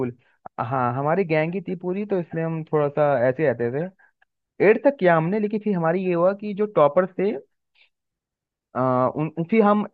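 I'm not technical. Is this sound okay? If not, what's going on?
Yes, this one's fine: nothing goes wrong anywhere in the recording, so there's nothing here you need to worry about.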